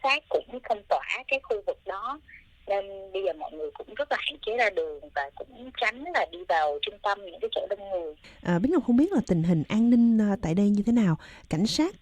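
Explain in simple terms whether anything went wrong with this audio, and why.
Nothing went wrong with this audio, and no technical faults can be heard anywhere in it.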